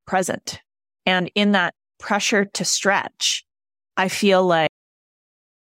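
A speech recording with a cut-off end. At 4.67 s the audio stops abruptly, in the middle of a sound. There is no fade and no natural decay. The signal drops straight to digital silence, which lasts for the remaining second or so. The final stretch of audio was never written out or played back. The last buffers of the recording were lost before they reached the file or the output.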